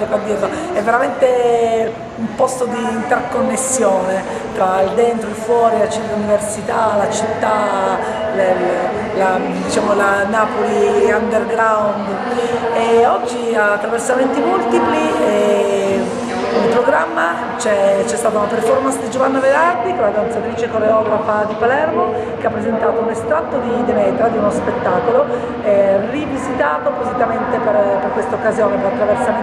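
From 19.74 s to the end, the sound turns dull and muffled: de-emphasis has been applied wrongly, so a treble-cutting filter meant to reverse a pre-emphasis boost acts on audio that never had one, or acts a second time. The response slopes smoothly downward, sitting about 14 dB lower at 10 kHz than at 1 kHz. On a spectrogram the upper region dims abruptly at 19.74 s, fading progressively toward the top rather than ending in a hard edge, while the waveform loses its fine, sharp detail.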